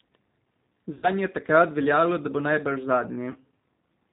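G.729 codec damage runs through the whole speech clip: the 8 kbit/s coder rebuilds the voice from a vocal tract filter, a pitch predictor and a few pulses per frame, cutting everything above 4 kHz, so the speech sounds plainly band-limited, rough and slightly synthetic.

VoIP packet loss concealed by the speech codec occurs at 0.94–1.09 s, just before "je takrat veljalo da", where about 90 ms went missing, consistent with three lost packets, and again at 3.31–3.36 s, right after "veljalo da bo najbrž", a 30 ms gap fitting one packet. Each time the decoder stretches its last pitch and filter into a fading buzzy tone or coloured noise, and the voice stays weakened briefly after packets resume.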